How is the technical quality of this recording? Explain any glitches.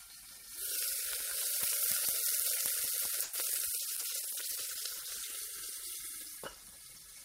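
There are two glitches, both typical of audio that went through a call, and they come close together in the middle.

At 3.23 s there's a call audio freeze lasting until about 3.35 s. The packets were most likely held up in transit, so the jitter buffer ran dry and the receiver filled about 100 ms by stretching the last bit of sound into a short fading buzz or hiss. Once the data showed up, playback resumed from where it left off. Nothing is lost, but everything after that point runs about 100 ms late.

Right after, from 3.78 s to 5.39 s, there's a call bitrate drop. The bandwidth estimate fell and the encoder went from 32 kbps down to 14 kbps, staying at the bottom for around 1.5 s. At that rate Opus codes much more coarsely and cuts off the upper frequencies, so the sound turns rough, watery or muffled. It regains its clarity once the bitrate recovers.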